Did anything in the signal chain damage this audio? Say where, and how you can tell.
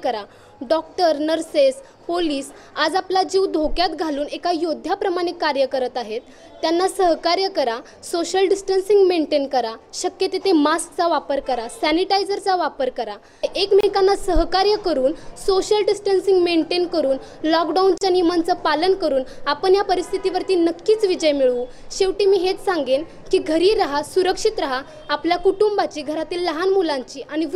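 Yes. There is a gap at a join of encoded pieces at 13.81 to 13.83 s, about 27 ms, and again at 17.98 to 18.01 s, about 35 ms. Continuous sound drops to silence with edges smeared by the codec, then resumes exactly where it stopped. This is a codec-stage fault: separately encoded segments were joined without trimming, so each segment's leading encoder delay and final-frame padding remain as short dead spots at the seams.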